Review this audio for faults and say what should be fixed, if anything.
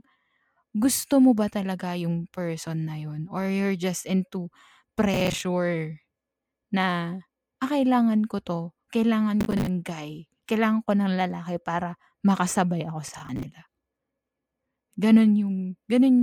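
Gritty processor overload crackle tears through the speech at 5.14–5.41 s, 9.41–9.67 s (just before "guy kailangan ko") and 13.08–13.43 s (right after "para makasabay ako"). Each time, the processor missed about 15 deadlines in quick succession, each refilling a roughly 10 ms buffer with stale audio. Freeing processing headroom or enlarging the buffer would prevent it.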